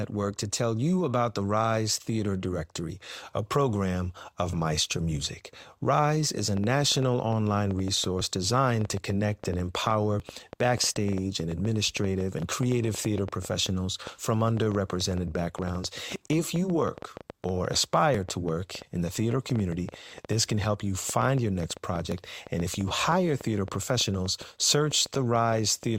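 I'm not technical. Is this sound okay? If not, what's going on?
No. Two problems can be heard.

The first is a train of clicks. Right after the words "is a", at 6.57 seconds, a ticking starts and runs almost to the end, stopping at 25.84 seconds. It comes about six times a second at an uneven pace, around a hundred clicks in all. The clicks all sound much alike and continue through the pauses. The likely cause is interference from nearby equipment or a faulty connection or power supply.

The second is overlap between stream segments. The audio arrives in pieces about two seconds long. Where two pieces overlap, the player trims a few milliseconds that weren't really repeated, so the sound jumps. Each jump is a tiny click or skip. They happen at 8.21, 10.20, 12.18, 16.16, 18.15, 20.13 and 22.12 seconds. Most are about two seconds apart, which matches the length of the pieces.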